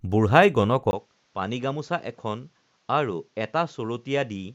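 At 0.91 s the sound drops out for about 20 ms, then returns duller, a few decibels quieter, with nothing above 7.6 kHz and faint new background noise. This is likely an input switched to a poorer device. A spectrogram shows a sharp ceiling; the waveform, a gap and smaller envelope.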